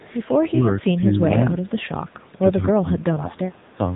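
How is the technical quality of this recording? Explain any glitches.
The recording is clearly degraded. It has coded mobile-call quality throughout and brief call-processing glitches.

Across the whole clip, the speech carries the sound of the AMR narrowband mobile codec. Nothing passes above 3.8 kHz. The codec rebuilds the voice from a vocal-tract model and sparse pulses. At this rate it sounds buzzy and synthetic, which fits a mode near 8 kbps.

From 0.0 to 0.07 s and again from 1.66 to 1.7 s, there is an echo leak. A faint, delayed copy of the voice trails 194 ms behind. It is very quiet, about 30 to 35 dB below the speech. The likely cause is a loudspeaker echo canceller that missed part of its own pickup.

From 0.91 to 1.54 s and from 2.62 to 3.47 s, there is speech suppressed in double talk. The voice dips. It loses about 10 dB in the first stretch and about 20 dB in the second. 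This likely happens because the echo canceller turned everything down while both sides talked.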